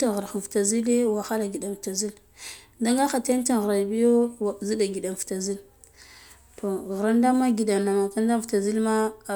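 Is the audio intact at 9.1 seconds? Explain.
Yes, the audio is intact at 9.1 seconds, with no fault present at that moment.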